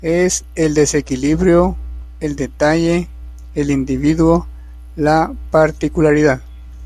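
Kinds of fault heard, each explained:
No technical faults can be heard in this speech.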